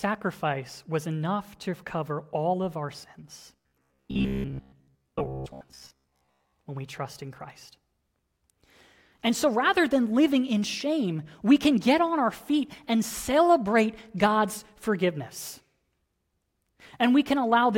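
From 3.56 to 6.54 s, after "all of our sins", robotic sound sets in: a rigid 66.7 Hz buzz, likely from repeating 15 ms buffers, replacing most of the audio.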